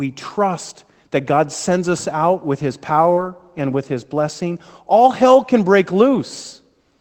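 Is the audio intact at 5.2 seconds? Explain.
No, at 5.2 s there's sample clock jitter, present throughout, with timing wobble of around a microsecond and a half, giving a faint hiss about 40 dB under the speech that rises on loud, bright sounds.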